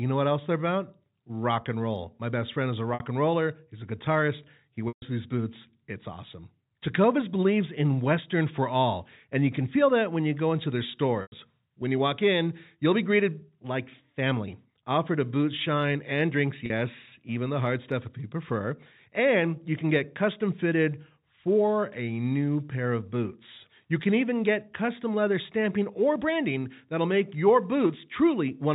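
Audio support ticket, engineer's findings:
Packet loss with pitch repetition, four dropouts: 2.94–3.00 s (60 ms), 4.88–5.02 s (140 ms), 11.22–11.32 s (100 ms), 16.66–16.70 s (40 ms). Receiver concealment replays the last pitch period, fading over about 50 ms. The 40 and 60 ms gaps give a brief buzzy hold. The 100 and 140 ms gaps decay to silence before speech cross-fades back. Gap sizes fit 20 ms packets. Spectrogram: frozen flat harmonic stripes, then a dark gap under the 4 kHz G.711 ceiling. Waveform: identical repeating cycles under a shrinking envelope.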